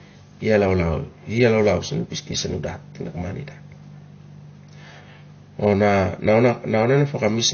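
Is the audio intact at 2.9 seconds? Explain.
No. At 2.9 seconds the speech carries AAC compression damage, which runs through the entire clip rather than starting at that point. Nothing is present above about 6.5 kHz, so the sound is dull and lacks air, and sibilants have a smeared, fizzy, warbling texture. The likely cause is an AAC-LC encode starved of data, consistent with a bitrate around 32 kbps. The encoder pulled its cut-off down and coarsely quantised or discarded spectral detail in each frame.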